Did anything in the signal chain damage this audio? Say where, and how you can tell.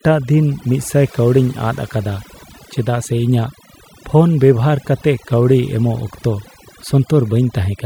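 Yes. Overdone noise removal runs through the whole speech clip, at the call-processing stage. Gaps between phrases sink to near silence dotted with twinkling specks. A suppressor set too aggressively is switching off frequency bands near its noise estimate, taking quiet speech detail with them.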